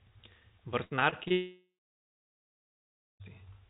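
From 0.84 to 1.32 s there's repeated packet loss, with six short holes up to 65 ms each patched over, about a third of that stretch, so it turns choppy and robotic. Then from 1.32 to 3.22 s it goes quiet: a brief fading buzz or hiss, then about 1.5 s of silence, likely a long network dropout. The narrowband sound, with nothing above 4 kHz, fits a G.711 phone-style call path.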